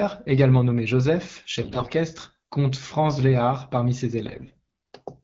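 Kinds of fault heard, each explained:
AMR bit errors: flipped low-priority bits in AMR-WB frames slip past the checksum, misplacing excitation pulses and skewing fine pitch, gain and spectral values. At 1.62–1.92 s and 4.25–4.57 s the speech keeps pitch and level but turns hoarse and gargly, worse in the first burst.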